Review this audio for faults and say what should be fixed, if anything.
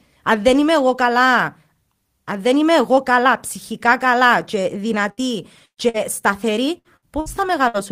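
Burst of packet loss occurs seven times, at 5.11–5.20, 5.65–5.80, 5.89–5.97, 6.78–6.88, 6.97–7.05, 7.20–7.29 and 7.68–7.77 s. Each time except at 5.65 s, consecutive packets were lost or came too late, so the receiver stretched the last speech it had into a fading buzz or hiss for roughly 50 to 65 ms, then skipped ahead past about 60 ms of missing speech. The 5.65 s burst is longest: 115 ms of concealment, 80 ms of it silent, and 120 ms lost. A larger jitter buffer with forward error correction or redundant packets on the network path should prevent these gaps.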